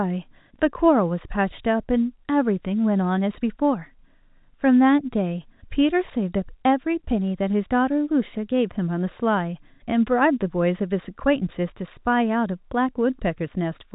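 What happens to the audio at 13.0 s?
Nothing goes wrong at 13.0 s: the speech continues intact through the G.711 telephone coding, band-limited below about 3.8 kHz as that path always is.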